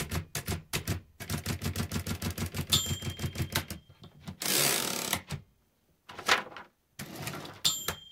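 Listening to this recording of sounds, nothing technically amiss stood out.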